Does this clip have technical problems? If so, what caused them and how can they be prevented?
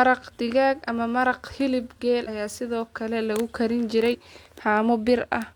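Yes. Compressed frames are skipped at 0.84, 2.23 and 4.09 s. The speech jumps ahead by about 50, 150 and 50 ms, the middle one between "hilib geel" and "ayaa sidoo". Whole frames were missing from the file or refused by the decoder as damaged. Prevention: deliver files intact and check they decode cleanly.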